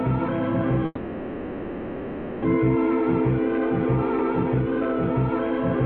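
A music clip, interrupted by what is most likely a long network dropout: the stream stopped delivering audio from about 0.85 s to 2.46 s. The receiver bridges the gap for roughly 1.6 s by stretching the last received sound into a decaying buzz or hiss, with only a brief instant of silence. Playback then resumes later in the music, about 0.7 s of timing having shifted, and some 0.9 s of the original passage never plays.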